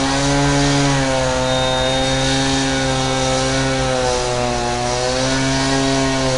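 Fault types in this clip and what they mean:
4-bit ADPCM compression: samples were coded as coarse 4-bit steps from a prediction, so plainly audible gritty hiss follows every loud sound, and nothing remains above 10.6 kHz.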